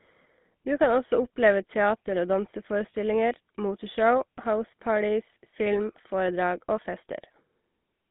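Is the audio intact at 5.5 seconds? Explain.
No. At 5.5 s, as throughout, the GSM full-rate codec, consistent with 13 kbps, rebuilds speech from a vocal-tract model driven by sparse regular pulses, giving plainly audible buzzy, gravelly roughness. A spectrogram shows energy confined to about 150 Hz to 3.6 kHz.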